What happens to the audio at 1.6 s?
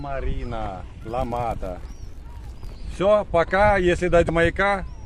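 A filter restarted on every block, losing its state each time, between 1.00 and 2.87 s, which fits 1024-sample blocks, so each starts with a transient, producing a 46.9 Hz buzz that tracks the sound's level.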